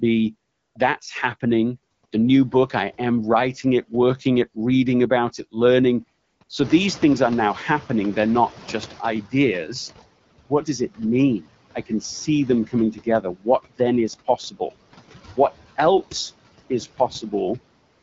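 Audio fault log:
throughout: noise suppressor artifacts. The suppressor pulls down bands it judges to be steady noise, frame by frame, cutting the background by about 17 dB between words, so the residue breathes with the speech.
0.51–0.75, 1.93–2.03, 2.05–2.11 (just before "new book I am"), 6.23–6.39, 6.43–6.49 (just after "reading about it learning"), 17.93–18.02 s: AMR comfort noise. During these pauses the phone stopped sending speech frames for between 60 and 240 ms, and the receiver filled the gaps with smooth synthetic hiss that switches in and out, replacing the real background.
6.63–9.74 s: noise suppressor catching up. The room noise jumps by about 16 dB around 6.5 s, and the suppressor's noise estimate lags. For about 3.1 s the louder background comes through only partly reduced, and it sinks as the estimate adapts and reaches a cut of about 12 dB.
12.93–13.46 s: speech cut by the noise suppressor. 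Between "see them coming" and "then is" the suppressor mistakes soft parts of the speech for noise and lowers them by up to about 14 dB for around 150 ms in total, so word edges sound swallowed and faint.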